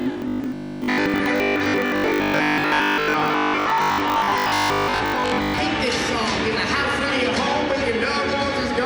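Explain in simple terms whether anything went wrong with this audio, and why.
From about 0.02 s to 5.6 s the audio turns into a stiff, metallic buzz: robotic sound from repeated short buffers. New audio likely arrived too slowly, so the playback kept repeating its last 20 ms while most of the real sound was skipped. Those repeats create a fixed 50 Hz buzz. Mains hum can also sit at 50 Hz, but hum plays steadily underneath the audio, while here the sound itself is replaced by the buzz, which still roughly follows its shape.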